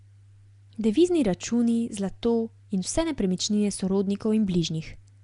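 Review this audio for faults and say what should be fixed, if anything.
Throughout, the speech sounds hissy and smeared, with nothing above 10.6 kHz. This is likely Nellymoser compression, which fills bit-starved bands with noise. To prevent it, record or archive through a modern codec at a generous bitrate, or keep the uncompressed original, rather than routing it through Nellymoser.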